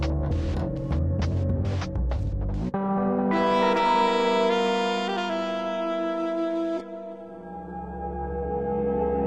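At 5.58 s the adaptive stream drops to a lower bitrate as the connection slows, which fits a switch from 96 kbit/s AAC to 16 kbit/s HE-AAC. With no gap, the music loses everything above 11.8 kHz and codec artefacts thicken.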